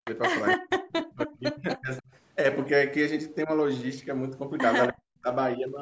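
Between 0.00 and 0.06 s, and again across 0.55 to 2.08 s and 4.91 to 5.27 s, the speech dips by up to about 40 dB. The likely cause is speech suppressed in double talk, where the canceller ducked the talker while the far side spoke. From 0.05 to 0.11 s a faint delayed copy of the speech arrives 296 ms late, about 15 dB below the speech, likely an echo leak from a loudspeaker's uncancelled pickup.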